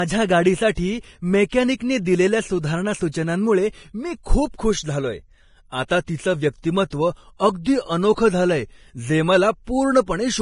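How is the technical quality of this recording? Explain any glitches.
Pretty rough technically, with heavy lossy-codec damage throughout and one brief smearing glitch near the start.

Throughout the whole clip, the speech sounds hissy and grainy, with nothing above about 10.5 kHz. It's likely Vorbis compression at a low bitrate, roughly 29 kbps, with the treble coarsely quantised into noise.

From 0.75 to 0.77 s there's pre-echo, a 25 ms hiss ahead of a sharp attack. Quantisation noise spread across the codec block leaks into the quiet just before it.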